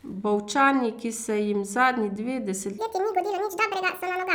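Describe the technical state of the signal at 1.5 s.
At 1.5 s the speech signal is intact, with no audible technical fault at that moment.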